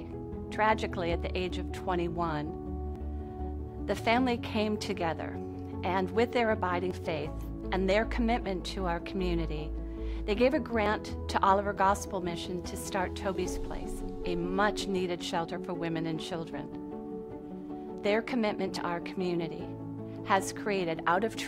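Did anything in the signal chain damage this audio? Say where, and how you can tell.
Yes. At the driver or buffer stage, the audio was likely handled in blocks of about 4 s, and a short piece was lost each time one block was closed and the next opened. The result is audio missing between chunks: brief skips at 2.96, 6.91, 10.86, 14.81 and 18.76 s, about 50 ms each, spaced almost exactly 4 s apart. The sound on either side of each gap is butted together with no silence, so each one registers as a small jump forward.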